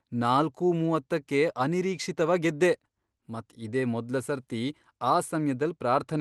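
No faults can be heard in the speech, which comes through a call codec path whose top end stops around 12 kHz, as expected for Opus at its usual call settings.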